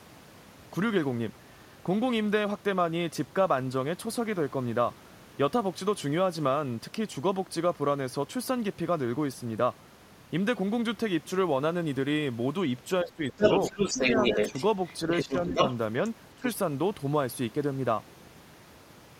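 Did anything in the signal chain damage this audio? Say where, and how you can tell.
Yes. Speech suppressed in double talk, at the call-processing stage: the speech dips at 13.03–13.34 s, 13.7–14.53 s, 15.06–15.55 s and 16.36–16.45 s, by roughly 10 dB (about 5 dB in the second). This is likely an echo canceller that could not separate the near talker from loudspeaker echo and ducked both.

The other side's voice is leaking through, also at the call-processing stage. A second voice runs from 13.28 to 15.74 s at roughly the same level as the main speech, with a brief scrap at 16.44–16.52 s about 10 dB lower. The likely cause is residual loudspeaker echo the canceller failed to remove.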